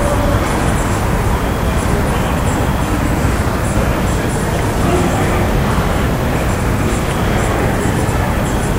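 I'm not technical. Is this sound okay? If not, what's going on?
Yes, this sound is okay, and nothing is going wrong with it.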